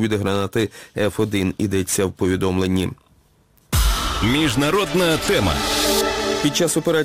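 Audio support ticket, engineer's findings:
Crude rate conversion, present throughout. Gritty, inharmonic fizz riding on louder and brighter passages. Error products sit roughly 20 dB below the signal. Pattern fits a 48 kHz to 44.1 kHz change by nearest-sample picking. Samples dropped on a fixed repeating cycle. No anti-alias or interpolation filter. Periodic error produces shifted, inharmonic copies of the source. Probable component: resampler in the playback or export path.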